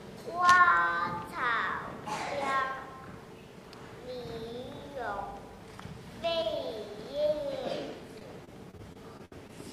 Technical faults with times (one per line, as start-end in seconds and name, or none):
8.19-9.51 repeated packet loss (robotic sound)